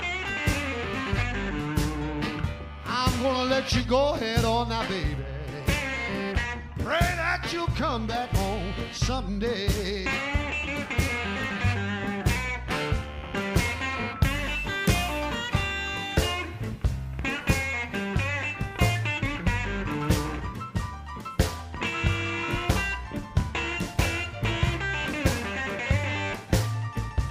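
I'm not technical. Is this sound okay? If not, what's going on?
Yes, it sounds fine.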